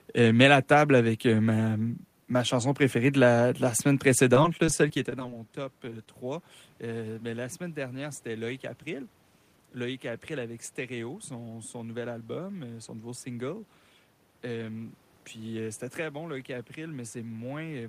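From 4.34 s to 6.07 s, just after "la de la semaine", the speech breaks up with repeated packet loss, giving a robotic sound. Fifteen short holes, none longer than 17 ms, are each bridged by extending the preceding sound, about 159 ms of fill in all. The result is choppy, with pieces missing. A spectrogram shows harmonics frozen into brief flat slices with hard vertical edges, and the waveform shows copied, looped cycles. The level change near 5.0 s comes from the talker moving.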